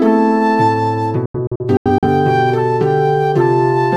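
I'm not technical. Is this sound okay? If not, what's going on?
No. Between 1.26 and 2.08 s there's a digital broadcast dropout: the receiver briefly lost the signal and muted, leaving several short silent holes, the longest about 85 ms. Unlike a crackling loose connection, the sound simply vanishes and returns, and the missing bits are gone.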